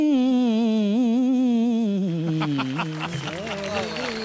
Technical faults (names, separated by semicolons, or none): none